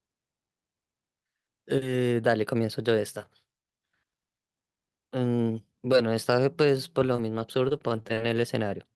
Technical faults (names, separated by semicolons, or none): scattered short gaps